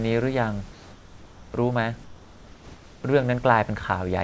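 From 2.04 to 3.04 s, the real background drops out and a steady, featureless hiss replaces it, about 2 dB quieter. This is comfort noise in place of the background, likely from discontinuous transmission during a pause.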